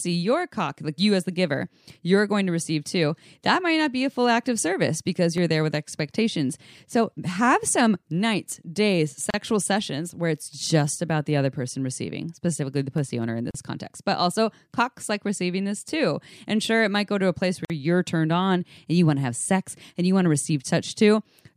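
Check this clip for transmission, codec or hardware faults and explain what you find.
Two kinds of fault here: a pair of scratch-tick bursts and three little gaps where separately encoded pieces were joined.

CD scratch ticks show up from 5.38 to 6.12 s (seven ticks) and again from 12.74 to 13.23 s (five ticks). A blemish on the disc wipes out more data than error correction can rebuild, once per revolution, so the player patches or mutes those samples. You hear a quick run of tiny clicks, roughly ten a second, each no more than a millisecond or two, of uneven strength.

There's also a gap at a join of encoded pieces at 9.30 s (about 35 ms), 13.51 s (about 37 ms) and 17.65 s (about 50 ms). Each piece went through its own encoder run, which puts a stretch of silence at the start and pads out the final frame, and nobody trimmed that before splicing. So the sound just drops into a brief hole with smeared edges, then picks up exactly where it left off.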